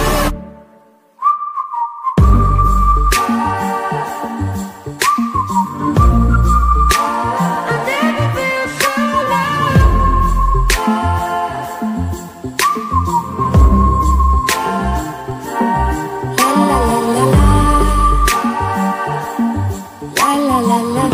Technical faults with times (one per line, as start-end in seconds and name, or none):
15.31 DC step